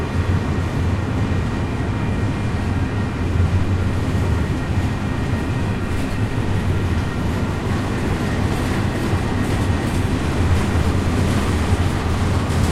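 Listening to this recording of sounds, nothing stood out as a technical problem at any point.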